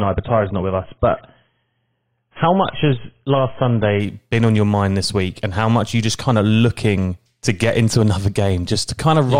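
A speech recording whose first 4.0 s show an adaptive stream starting at a low bitrate: nothing reaches above 3.8 kHz and the codec artefacts are stronger, which fits a 16 kbit/s AAC stream. At 4.0 s the player switches to a richer stream, roughly 96 kbit/s, and the treble returns at once. A bandwidth-limited source would stay dull throughout; here the improvement is a single sudden step with no gap or dropout.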